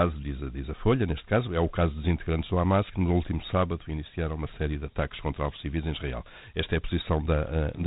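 From start to finish the speech sits in a narrow, telephone-like band with nothing above about 3.9 kHz, and a gritty hiss rides along with every syllable, clearly audible throughout. This is Dialogic VOX ADPCM: each sample is stored as a coarse 4-bit step from a prediction, and the quantisation error tracks the signal as grainy noise. The band limit points to an 8,000-samples-a-second stream, about 32 kbps.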